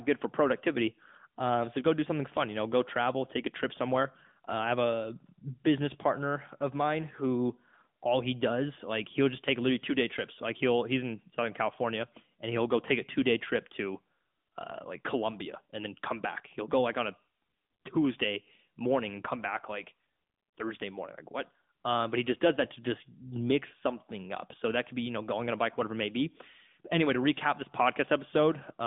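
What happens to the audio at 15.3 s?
At 15.3 s, as across the whole recording, the speech has been carried through the AMR narrowband mobile codec. The signal was reduced to a telephone line and rebuilt from a vocal-tract model excited by sparse pulses, so nothing above about 3.7 kHz survives and the band sits near 150 Hz to 3.6 kHz. Plainly audible coding damage gives the voice a buzzy, synthetic edge, which fits a mid-rate mode of roughly 10 kbps.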